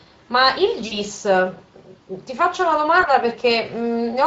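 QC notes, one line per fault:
Throughout: Speex codec. The whole clip carries plainly audible Speex coding damage, a hoarse, grainy quality on the speech where the CELP model is short of bits for the excitation. The texture fits a mid-rate setting of around 20 kbps. The harshness and roughness of the coding sit on every phrase. Any upper band above 8 kHz is only a shaped noise fill rather than real detail.
0.87–0.98 s and 3.01–3.06 s: VoIP packet loss concealed by the speech codec. At 0.87 s about 40 ms of audio goes missing, which fits two 20 ms frames, and at 3.01 s a single 20 ms gap follows. The decoder bridges each hole by repeating its last pitch and filter at falling gain, so you hear a brief stretched, fading sound. Because each frame builds on the one before, the sound stays thin and off for a little while after the packets return, which is why the disturbance outlasts the gap itself.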